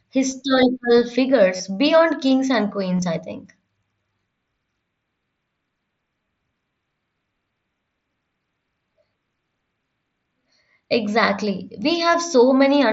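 A near-hidden blip at 0.30 s, then a short buzzy held tone from 1.56 to 1.60 s before "beyond kings and", and broken warbly patches from 2.98 to 3.02 s before "I think". This is concealed Bluetooth headset packet loss: lost packets were replaced by repeating recent waveform.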